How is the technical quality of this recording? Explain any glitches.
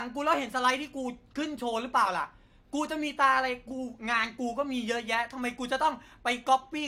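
No glitches or technical faults can be heard here.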